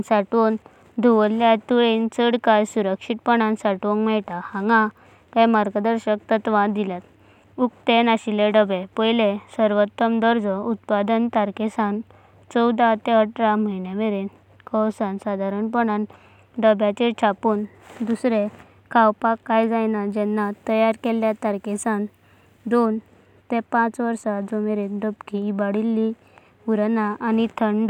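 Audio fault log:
20.16–22.86 s, pre-emphasis left on: just after "खावपाक कण्या", a treble boost matching the CD 50/15 µs curve goes out without its matching de-emphasis, lifting 10 kHz about 8 dB relative to 1 kHz, so the speech turns thin, bright and sharply sibilant.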